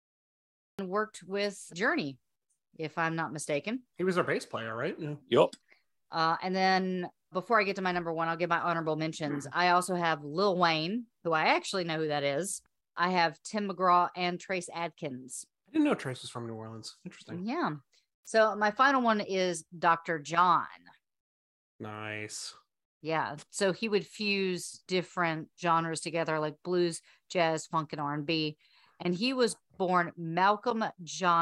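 Silence runs until 0.79 s, then speech begins mid-sound at "worked with", a cut-off start from late capture: flat waveform, then an abrupt vertical spectrogram edge.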